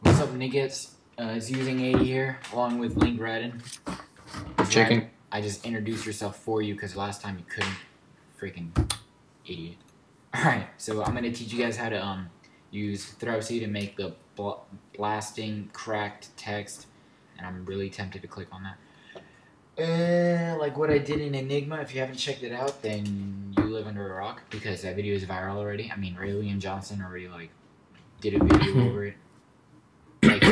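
Nothing in the audio stood out as a technical problem on listening.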